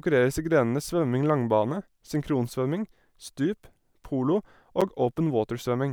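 At 4.81 s the speech is broken by a sharp tick, a tiny hole of about 8.7 ms where the sound drops straight to nothing and returns. This is a block of digital silence: a run of samples was replaced by zeros, either because the output buffer was not filled in time or because a calculation produced invalid values. With no fade at either edge, the abrupt jumps produce the click, and the gap is too short to register as a pause.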